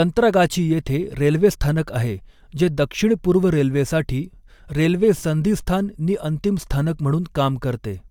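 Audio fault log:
Nothing to flag here: the speech comes through without any faults worth logging.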